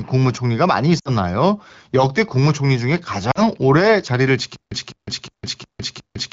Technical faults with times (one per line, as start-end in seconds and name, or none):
0.99-1.10 lost AMR speech frames
3.31-3.40 lost AMR speech frames
4.56-6.33 stutter with silent gaps